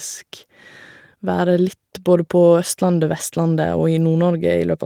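No technical faults can be heard in this recording.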